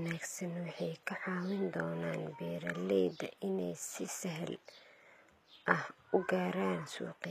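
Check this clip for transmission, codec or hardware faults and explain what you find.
One codec fault runs through the whole speech clip. The treble sounds synthetic, with gritty, lispy s sounds. This is likely HE-AAC compression, consistent with roughly 24 kbps. Upper frequencies are rebuilt by copying lower bands upward, so harmonics misalign.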